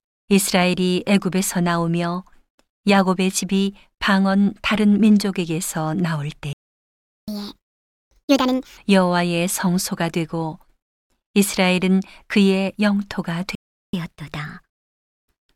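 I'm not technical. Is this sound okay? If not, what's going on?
No. There are two playback stalls, at 6.53 to 7.28 s and 13.55 to 13.93 s. The speech goes silent, then resumes where it stopped, with nothing skipped. The likely cause is the player running short of data.

Right after each stall comes catch-up at higher speed. From 7.28 to 8.77 s the speech plays 1.5 times faster and sounds much higher-pitched. From 13.93 to 15.55 s it is only slightly faster and higher. Both speed and pitch rise together, which is how it differs from someone simply talking quickly.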